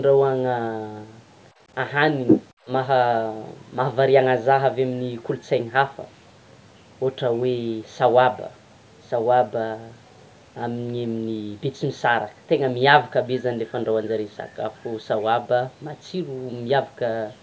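Speech clip with the other side's voice leaking through from 2.27 to 2.45 s, a brief second voice around 5 dB louder than the talker, likely from incomplete echo cancellation of loudspeaker playback.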